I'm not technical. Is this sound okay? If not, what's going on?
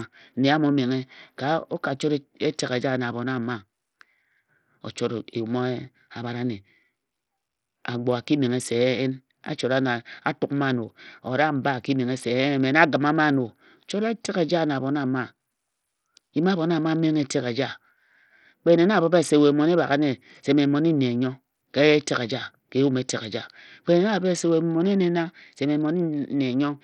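No. Bluetooth SBC compression is audible from start to finish. The speech sounds dull and rough, with a gritty hiss clinging to it and the crisp top end coming and going. This is likely the basic codec Bluetooth uses to squeeze sound over a wireless link, here set very tight. It splits the sound into a few broad pitch bands and starves the highest ones, so the sharp detail drops out and the rest turns coarse.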